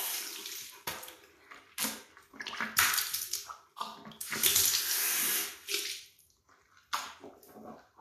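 From start to finish, nothing is heard above 14.2 kHz. The treble is hissy and grainy, tones sound roughened, and attacks are blurred. This is likely Vorbis compression at a low setting, fitting roughly 38 kbps. Fine high detail was coded so coarsely it turned to noise.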